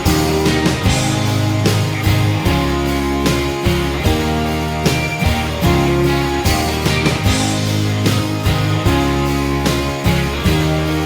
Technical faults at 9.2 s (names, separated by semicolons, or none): none